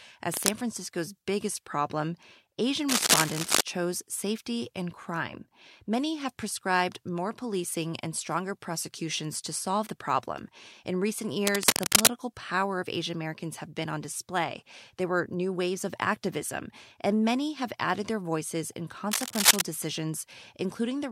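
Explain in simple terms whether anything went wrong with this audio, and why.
Four short bursts of scratchy, crackling noise cut across the speech, each roughly as loud as the talking or a bit louder: at 0.31 to 0.50 s, at 2.89 to 3.61 s just before "chose safety and crime", at 11.47 to 12.12 s just before "power of", and at 19.11 to 19.62 s just after "added their voices in". This is cable scratch noise, likely from a worn cable or plug being moved so its electrical contact flickered.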